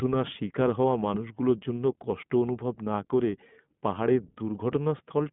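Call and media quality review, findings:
iLBC codec, throughout: band limited to roughly 150 Hz–3.5 kHz; rough, synthetic speech texture from independently coded frames, consistent with the 20 ms, 15.2 kbps mode.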